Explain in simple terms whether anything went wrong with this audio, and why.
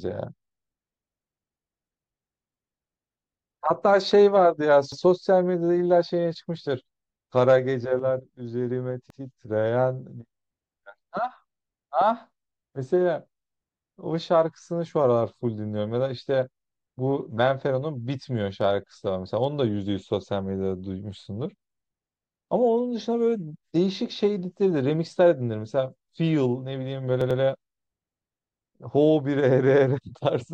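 The speech stutters three times, and each is a fault called a repeated buffer. The player ran short of fresh audio, so it replayed the piece it had just played. At 4.92 to 5.02 seconds and 9.10 to 9.20 seconds, one short chunk plays twice. At 27.21 to 27.40 seconds it plays three times. Each chunk lasts about 93 milliseconds, which fits a 4096-sample buffer. Every repeat starts with a hard jump. No speech seems to be lost.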